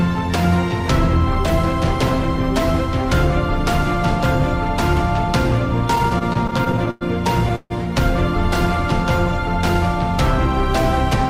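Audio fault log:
5.95–7.03 s, repeated stalls (stutter): packets arrived late or slower than they were played out, so the jitter buffer ran dry 14 times in about a second. Each time the receiver stretched the last sound to cover the wait, filling 255 ms in all, about 24% of that span, with the longest gap about 0.1 s. Nothing is lost, but the sound drags and stutters, catching repeatedly before moving on.
7.56–7.72 s, call audio freeze: a hold-up of packets in transit likely emptied the buffer, adding 145 ms of delay. The sound stops advancing: the last moment is held as a brief fading buzz or hiss, with about 40 ms of it falling to silence, before the audio resumes exactly where it stopped. Nothing is missing; a short pause has simply been inserted into the flow.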